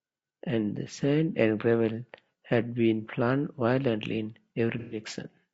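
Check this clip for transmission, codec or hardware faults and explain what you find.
Two faults are audible in this speech. Throughout, the voice sounds rough and grainy, with noise between harmonics, likely from low-delay AAC compression (AAC-ELD) at a low bitrate around 32 kbps. Unlike ordinary AAC, its short frames smear pitch structure. From 4.79 to 5.00 s there is AAC frame loss with concealment. The decoder rebuilt missing frames from earlier spectrum, which fits several lost frames. The result is a smeared, phasey patch rather than a clean dropout to silence.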